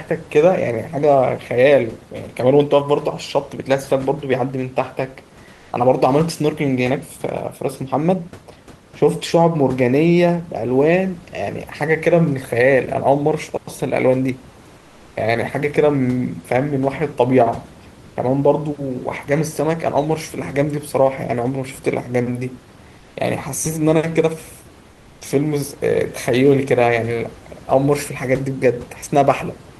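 Comfort noise in place of the background at 5.53–5.71, 14.77–15.15 and 22.99–23.15 s: the room noise in each pause becomes a flat, featureless hiss, about 1, 4 and 2 dB quieter. The likely cause is discontinuous transmission, with the receiver synthesising noise while the sender sends only occasional updates.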